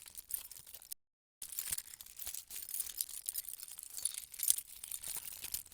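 At 0.93 s the sound stops abruptly in mid-flow and drops to silence, with no background or room tone left underneath, before cutting straight back in at 1.42 s. This is an audio dropout to silence lasting about 0.49 s, and whatever occurred during that half-second is simply missing. The likely cause is a brief loss of the input signal, such as a momentary disconnection or mute, while the recorder kept writing silence.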